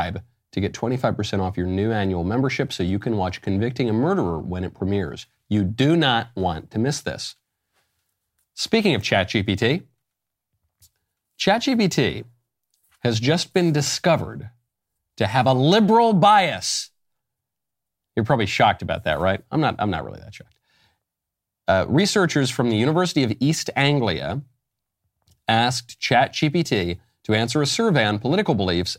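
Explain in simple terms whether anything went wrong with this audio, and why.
Listening through the speech, nothing went wrong that I could pick out, so there is no fault to explain here.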